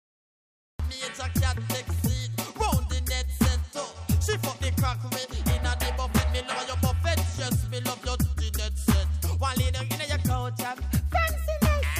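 The audio opens on digital silence until 0.80 s, then lurches in mid-sound with no attack or fade: a cut-off start, where capture began late.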